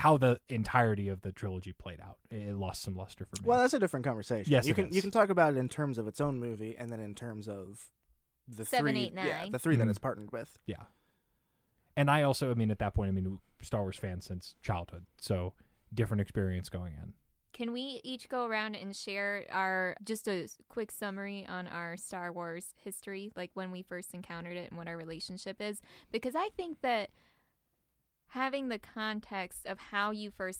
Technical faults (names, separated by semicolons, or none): none